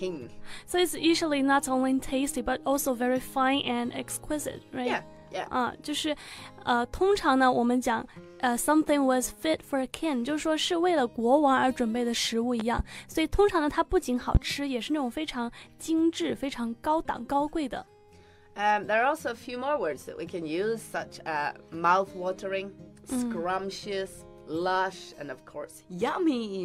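Two loud pops sit on top of the audio: a double pop from 12.60 to 12.82 s, roughly 10 dB above the signal, then a single louder one from 14.35 to 14.38 s, about 20 dB above it. The sound continues underneath. The likely cause is a voltage step from a plug, switch, static discharge or driver glitch.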